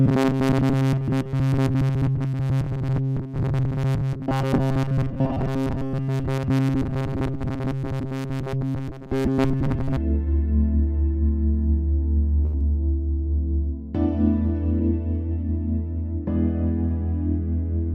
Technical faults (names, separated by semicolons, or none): robotic sound from repeated short buffers; short stall from a late packet; short concealed packet loss